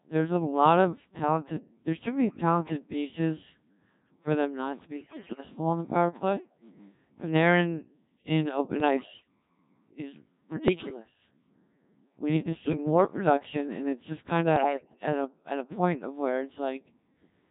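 Codec 2 vocoding runs through the whole speech clip. Only pitch, voicing, energy and a coarse spectral envelope survive, and the decoder rebuilds the voice from summed sine waves. The heavy buzzy, robotic character points to a very low rate, around 1.3 kbit/s.

Bit errors on digital voice radio strike at 4.97–5.40, 8.80–9.28, 10.68–10.99, 12.64–12.77 and 14.56–15.03 s. Corrupted bits scramble each frame's pitch, level and spectrum, so the voice lurches into warbles, bleeps and gibberish. The first burst is the harshest, with roughly one bit in seven flipped.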